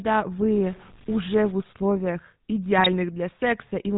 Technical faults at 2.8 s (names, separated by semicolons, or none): GSM full-rate codec; GSM bit errors